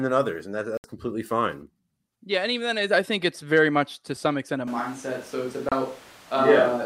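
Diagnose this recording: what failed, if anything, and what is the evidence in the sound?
Bluetooth stall at the wireless playback link. Silence of 67 ms at 0.77 s, after "than others and that", and 29 ms at 5.69 s. The headphone buffer likely ran dry awaiting resent packets.

Switch to a distant microphone at the capture stage. From 4.68 s, after "to some extent a", to the end, the sound turns roomy and hollow. Level barely changes. Room noise sits roughly 25 dB below. The close microphone likely dropped out.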